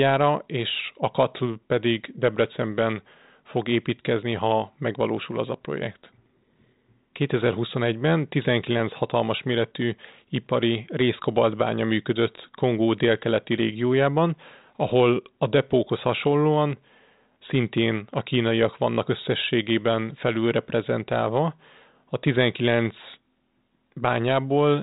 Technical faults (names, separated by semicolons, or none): none